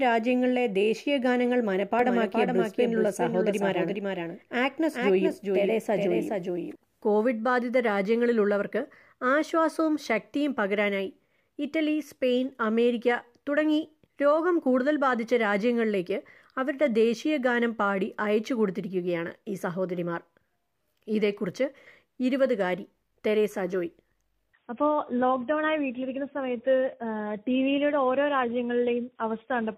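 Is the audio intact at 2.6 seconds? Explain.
No, a doubled audio track runs from 2.00 to 6.76 s, likely from a second, slower capture path, so a full-band copy trails about 0.4 seconds behind, a few decibels quieter.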